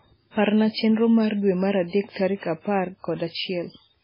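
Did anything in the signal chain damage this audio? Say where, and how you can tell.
Yes. The damage most likely comes from the codec stage, where MP3 compression squeezed the speech to a very low bitrate, consistent with about 16 kbps. Throughout the clip there is nothing above 5.3 kHz, a hard treble ceiling where the encoder cut the top band to save bits. The remaining spectrum sounds heavily degraded, watery and swirly, because weak frequency lines drop in and out between frames, and consonant attacks are smeared.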